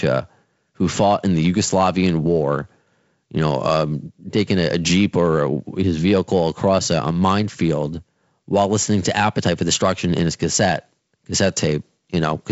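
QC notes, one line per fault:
No faults to log here; the speech comes over G.722 wideband telephone coding, with nothing above 7.7 kHz and a light coding grain that fits the codec running at its 48 kbit/s rate.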